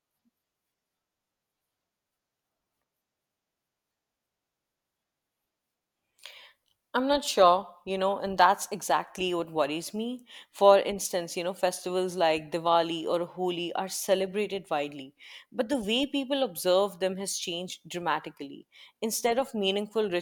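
Speech recording with no audible technical faults.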